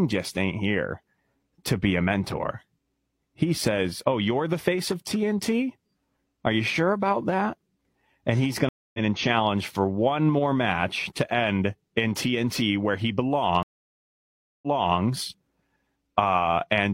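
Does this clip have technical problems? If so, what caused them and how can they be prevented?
Yes. Speech drops out twice and comes back at the wrong point, a stream reconnect each time. At 8.69 s, after "and he's", there is about 0.25 s of silence, and the audio resumes roughly 0.3 s further on, at "and challenge for one," so a piece is skipped. At 13.63 s, after "where he", nearly a second of silence runs to 15.00 s, and playback resumes 0.37 s earlier, repeating material. Both times the connection broke, the player reconnected, and a fresh decoder joined mid-stream, landing either past or before the point of loss. Prevent it with a stable network path, a larger client buffer, and resume logic that tracks the stream position to realign exactly after reconnecting.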